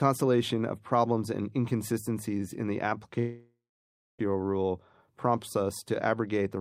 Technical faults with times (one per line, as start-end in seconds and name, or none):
3.19-4.21 long network dropout